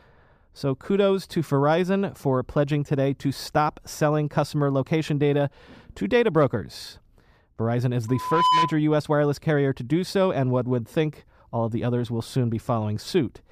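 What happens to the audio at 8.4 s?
A steady 1 kHz tone swells out of the speech from 8.08 s, growing over roughly 0.4 s until it sits about 5 dB above the voice, then stops at 8.78 s. At 8.4 s the sound is in the middle of this loudspeaker feedback squeal. The microphone is hearing the loudspeaker it drives, and at 1 kHz the round-trip gain tops unity, so that one frequency keeps reinforcing itself until the loop is broken.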